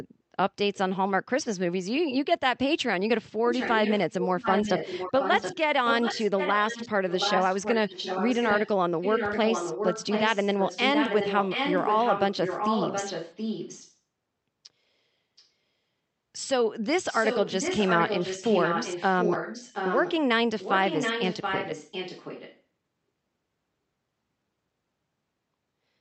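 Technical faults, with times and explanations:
3.46–8.69 s, 9.01–13.97 s, 15.37–15.44 s, 17.09–20.16 s and 20.59–22.62 s: echo leak. A copy of the talk trails about 725 ms behind, only around 5 dB down, with a barely-there scrap at 15.4 s. It's likely a far-end speakerphone whose echo canceller let its mic pickup back into the call.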